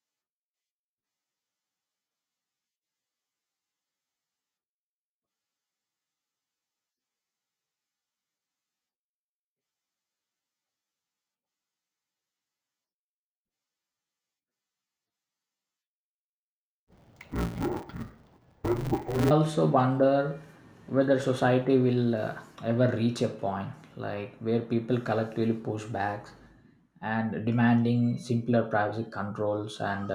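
From 16.84 s to 19.31 s the speech suffers from interleaved audio read as planar. Stereo data arriving as alternating left and right samples is being split as if each block held all left samples followed by all right samples. The blocks here are short, about 5.8 ms, which fits a 256-sample block. The result is dull, robotic speech with a buzz at about 172 Hz, the block rate, and no clear octave drop.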